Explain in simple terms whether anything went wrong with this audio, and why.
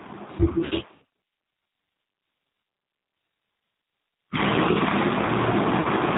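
The whole recording sounds slightly rough and synthetic, with nothing above 4 kHz, because it passed through the G.729 codec, a low-rate phone codec that rebuilds speech from a simplified model.

At 0.65 s and again at 5.81 s, the voice briefly smears into a fading buzzy tone or coloured noise. That's VoIP packet loss concealed by the speech codec: roughly 60 ms and 40 ms of audio went missing, and the decoder guessed.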